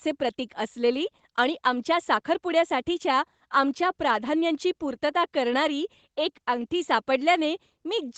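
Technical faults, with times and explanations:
No technical faults can be heard in this speech. It carries the sound of a call's microphone processing, with the lowest bass trimmed away and nothing above 8 kHz.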